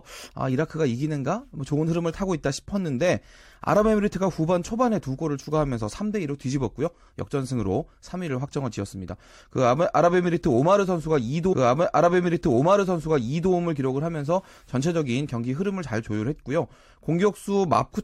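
A speech recording with one stream segment repeated: at 11.52 s the audio jumps back and replays the previous 2.0 s, running to 13.52 s, because the player queued the same segment twice. On a spectrogram the block of speech patterns appears twice in succession, with a thin vertical blip at the splice.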